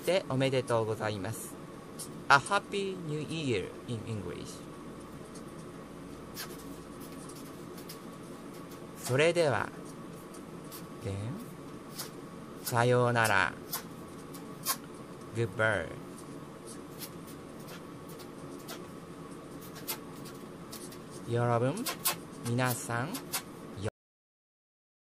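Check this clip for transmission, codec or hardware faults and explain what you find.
There's one fault here, a cut-off end. At 23.89 s the sound stops dead, right in the middle of whatever was playing, and drops straight to digital silence for the remaining 1.2 s or so. Nothing decays or tails off. What happened is that the final buffers never got written or played out, so the stream simply ends where the data ran out instead of where the sound naturally finished.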